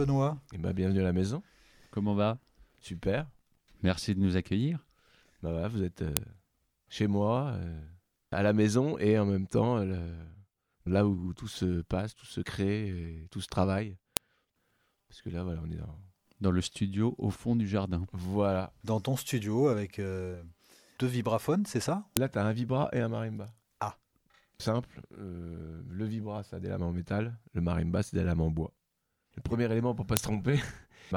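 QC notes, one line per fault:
6.17, 14.17, 22.17 and 30.17 s: file header played as audio. A sharp, loud click snaps out at each point, regardless of the sound around it. The clicks repeat every 8 s. This suggests 8 s pieces joined with their header bytes left in and played as samples.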